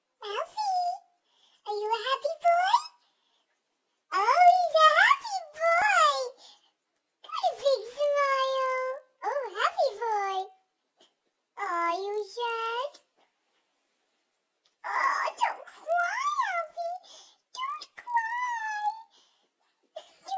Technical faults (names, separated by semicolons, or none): resampler restarted on every block